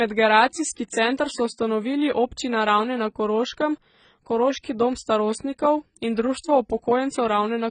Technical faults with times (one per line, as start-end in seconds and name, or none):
0.00-7.71 AAC compression